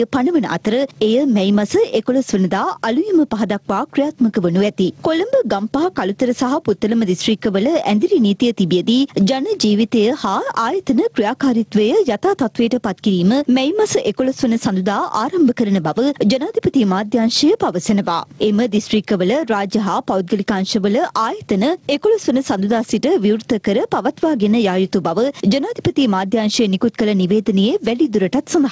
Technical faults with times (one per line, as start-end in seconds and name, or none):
0.00-28.71 gain pumping